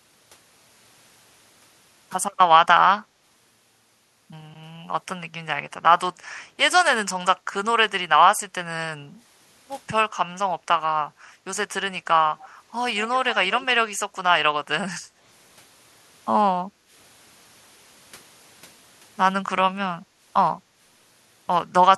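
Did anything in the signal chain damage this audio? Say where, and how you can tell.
Yes. The room background briefly sinks and then recovers at 6.12, 7.4, 15.01, 16.65 and 20.06 s. Each dip lasts roughly a tenth to a third of a second, and the deepest is about 17 dB at 7.4 s. This is background gated by the echo canceller in the call-processing stage. While far-end audio played through the loudspeaker, the canceller clamped the microphone path, and it released the path once that playback stopped.

At 12.39 to 12.49 s, a faint, delayed copy of the speech trails the original by 137 ms, sitting roughly 25 dB below it. This is an echo leak, also in call processing. The likely cause is that the far side's echo canceller failed to fully subtract its own loudspeaker output from its microphone, so a residue of the outgoing signal was returned across the call.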